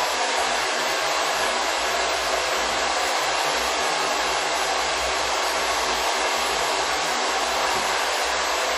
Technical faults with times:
0.00-8.77 WMA compression

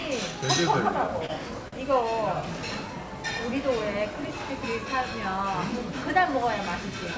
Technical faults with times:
1.26-1.32 short stall from a late packet
1.68-1.75 short stall from a late packet

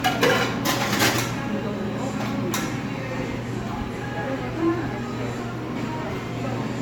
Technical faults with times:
0.00-6.82 generation loss

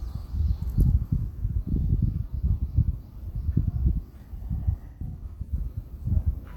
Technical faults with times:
4.87-5.53 AAC frame loss with concealment

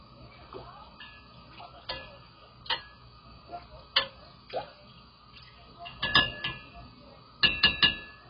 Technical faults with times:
0.00-8.29 AAC compression

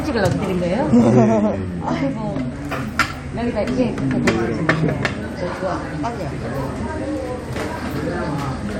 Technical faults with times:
none

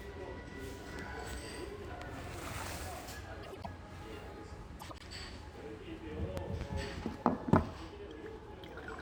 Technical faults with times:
1.33-1.36 loud pop
3.43-3.67 frames out of order
4.79-5.03 frames out of order
6.37-6.64 loud pop

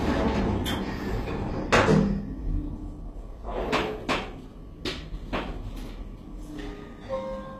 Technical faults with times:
0.00-7.60 HE-AAC compression

